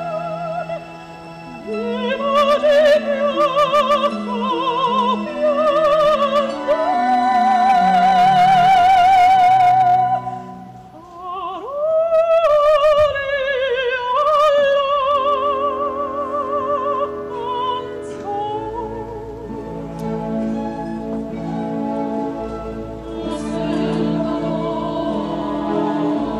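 Hard clipping at 2.12–4.07, 4.69–5.10, 5.45–10.00, 12.14–13.06 and 14.17–15.34 s: overdriven by about 2 to 8 dB, peaks are cut flat and crackle.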